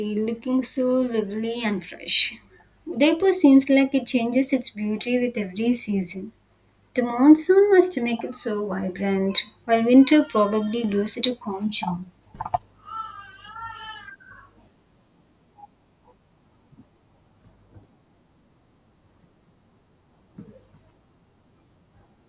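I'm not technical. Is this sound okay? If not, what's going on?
Yes, nothing here sounds wrong, so you can relax about this one.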